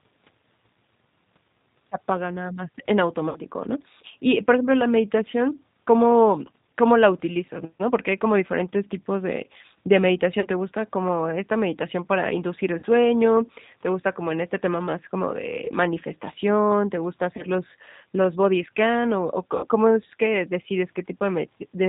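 Throughout, the speech carries G.729 codec damage: an 8 kbit/s coder rebuilds each frame from a vocal tract filter, a pitch predictor and a few pulses, so nothing above 4 kHz survives and the voice sounds rough and synthetic, unlike the smearing, swirling artefacts of transform codecs.

VoIP packet loss concealed by the speech codec occurs at 3.29 s after "apaga nada más en" (60 ms lost), 10.40 s (40 ms), 12.79 s (40 ms), 15.65 s after "este tema más como" (20 ms), 17.37 s (20 ms) and 19.57 s between "los body scan o" and "cómo es que" (60 ms). At each one, the decoder stretches the last pitch and filter into a fading buzzy tone or coloured noise, and the sound stays weak as it recovers.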